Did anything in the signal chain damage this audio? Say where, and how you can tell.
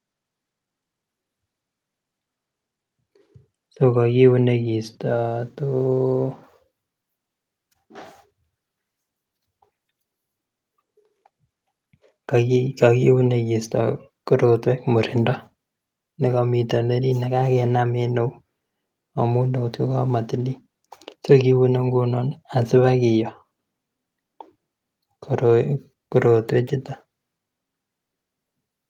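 No, none of the stages from capture through playback has left any audible damage on this speech recording. Nothing in the signal points to a problem anywhere in the chain.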